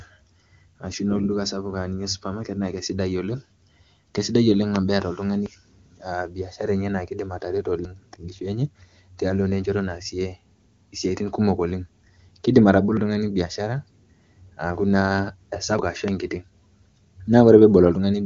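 A speech recording, carried over AMR wideband (HD Voice), sounds clear with nothing above about 7 kHz, which fits one of the codec's higher rates. Two loud pops land on it, one from 4.76 to 4.78 s just after "keisidai oleng" and one from 16.08 to 16.10 s. Each is a single sharp burst standing roughly 20 dB above the speech, likely an electrical pulse from a plug, switch or static discharge. The speech runs on underneath without a break, and that is what separates these pops from the dropouts. Three dropped buffers (overrun) come at 5.46 s, at 7.85 s just after "biashara enye naaidim atareto", and at 15.79 s just before "ashu enkiti". At each one the speech jumps forward by about a tenth of a second, with no silence in between. This is likely because the software fell behind and the hardware overwrote samples it had not yet collected. The lost stretch, not an added noise, marks these as dropped buffers rather than pops.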